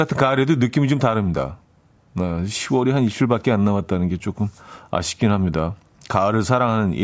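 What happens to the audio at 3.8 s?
Nothing goes wrong at 3.8 s; the speech there plays through intact, with no dropout, click or distortion.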